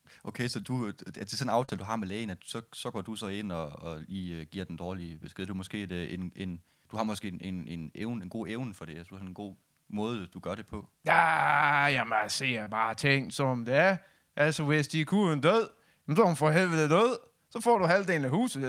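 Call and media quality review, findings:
Short concealed packet loss at 0.61–0.65 s, 1.65–1.70 s and 12.64–12.68 s. Speech gaps of 20, 40 and 20 ms were filled by decoder concealment extending prior sound, heard as brief smears.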